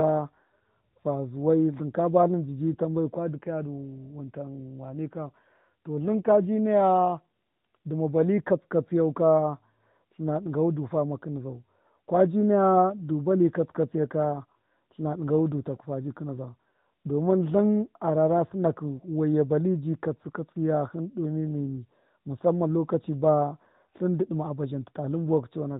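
From start to finish the speech carries the sound of the AMR narrowband mobile codec, with plainly audible damage. Everything above 4 kHz is gone, and the vocal-tract model rebuilt from sparse pulses makes the voice buzzy and somewhat synthetic, which fits AMR-NB at a mid rate of about 10.2 kbps. On a spectrogram the energy stops at a flat ceiling at 4 kHz, with smeared, blocky harmonics repeating on a 20 ms grid.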